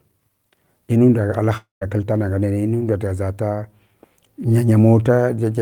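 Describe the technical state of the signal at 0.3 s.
At 0.3 s the speech signal is intact, with no audible fault at that point.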